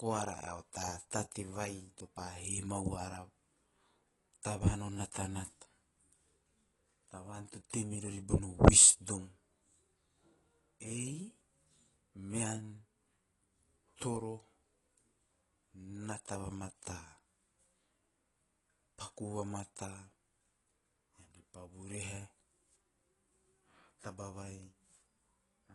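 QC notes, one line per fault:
Throughout, AAC compression: speech stops dead above 11.5 kHz and sounds dull, with warbling, fizzy smearing on sibilants and held vowels, likely from AAC-LC coding at around 32 kbps. A plain low-pass filter would dull the top without that swirling texture.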